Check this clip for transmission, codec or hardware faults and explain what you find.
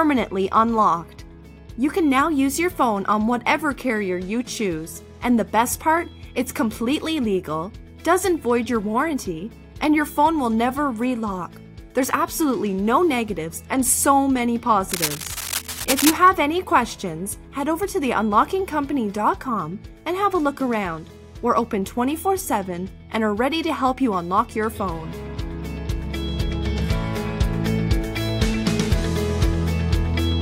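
One hardware fault is present: cable scratch noise from 14.91 s to 16.17 s, lasting about 1.3 s. For that stretch, dense, irregular bursts of crackle and rustle sit over the sound at roughly 5 dB below it, loud enough to compete with the programme material. The cause is likely a worn cable, connector or control being disturbed: its contact resistance fluctuates rapidly while it moves, injecting uneven noise into the signal path until it settles again.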